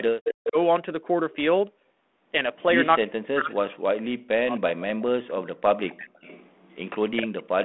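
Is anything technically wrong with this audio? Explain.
Yes. Two kinds of fault are audible, both pointing to an echo canceller on a speakerphone call.

Speech suppressed in double talk happens from 0.12 to 0.57 s, from 3.0 to 5.83 s, and from 7.05 s to the end. The speech dips by up to about 40 dB and cuts out in pieces. That adds up to roughly a third of a second, then about two seconds, then under a second. The likely cause is the canceller mistaking the local talker for echo while both sides spoke, and turning everything down.

Echo leak appears from 0.25 to 0.49 s and from 5.87 to 6.89 s. A copy of the speech returns 262 ms late. In the first stretch it is strong, only about 5 dB below the speech. In the second it is faint, about 25 dB down. This is likely loudspeaker sound reaching the microphone that the canceller failed to remove fully, so it was sent back.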